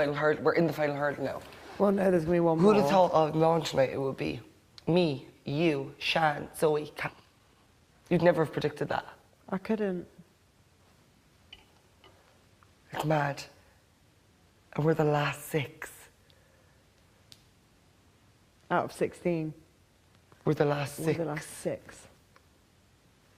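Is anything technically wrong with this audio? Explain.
Yes, there are two related faults.

Skip ahead at 7.07 s: a stretch of audio about a second long never reached the output, either lost in transit or discarded because the jitter buffer overflowed while newer audio was already queued. Nothing fills the hole, so the sound on either side is spliced almost directly, and it lurches forward abruptly with a chunk simply absent.

Jitter buffer speed-up from 7.17 s to 8.66 s: the receiver was still holding more audio than its target, so it trimmed short pitch-period-sized slices again and again, shedding about a fifth of a second to bring the delay down. Over those one and a half seconds the sound plays at about 113% speed with its pitch unchanged, giving a hurried, compressed feel just after the jump.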